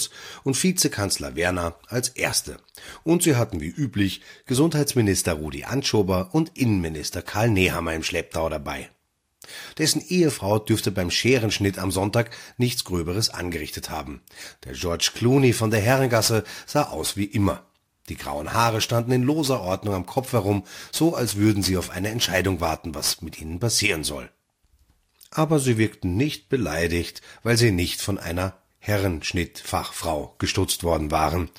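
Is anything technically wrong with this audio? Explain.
Yes. From 15.59 to 23.59 s, just before "passieren soll", the speech picks up sample clock jitter. The converter's clock wavers, so each sample lands slightly early or late. The timing error becomes an amplitude error wherever the waveform changes fast. Here the clock wanders by around ten microseconds. That puts the error only about 20 dB below the signal. It sounds like a rough hiss riding on the speech. It grows on loud and sibilant sounds and falls away in pauses.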